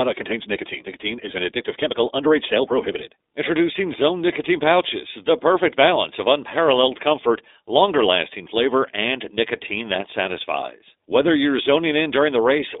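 From start to finish the speech carries iLBC codec coloration. The sound is confined to a telephone band of roughly 300 Hz to 3.7 kHz, so it is thin and boxy, with no air or sibilant sparkle above. The codec models each short frame's excitation on its own, and the plainly audible damage is a rough, synthetic grain, with a granularity that fits 20 ms frames at around 15 kbps.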